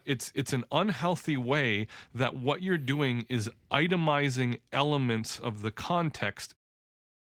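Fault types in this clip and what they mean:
The signal shows no technical faults, and the level eases down gently in the last moments, ending by about 6.57 s, with no click or hard edge at the close.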